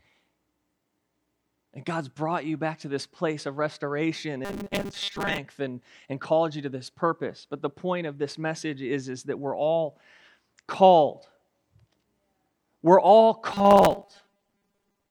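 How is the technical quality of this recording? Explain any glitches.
The recording has two glitches of the same kind. Robotic sound from repeated short buffers occurs from 4.45 to 5.39 s, after "this place of restoration" and before "and and called you", and from 13.51 s to the end after "we're all". It likely comes from audio arriving too slowly, so roughly half the time is filled by looping a 5 ms fragment. That forces a rigid, metallic 200 Hz buzz onto the speech.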